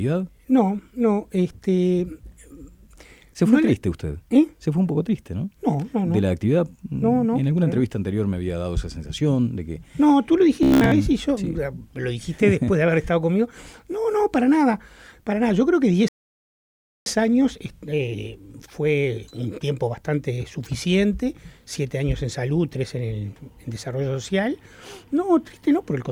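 From 10.63 to 10.95 s the sound turns into a rigid, metallic buzz pitched at about 66.7 Hz, while the underlying sound still shows through roughly. This is robotic sound from repeated short buffers. The likely cause is audio arriving too slowly, so a snippet of about 15 ms was looped to fill the gap and most of the real audio in that stretch was skipped. A steady tone forms at the loop rate. A stutter or echo would instead give audible repeats.

From 16.08 to 17.06 s there is a rebuffering stall. The audio drops to silence for close to a second and then picks up exactly where it halted. Playback ran out of buffered data and waited for more to arrive. A dropout would lose material, but here nothing is missing and nothing jumps ahead. The only change is about 0.98 s of added time, so everything after it plays that much later.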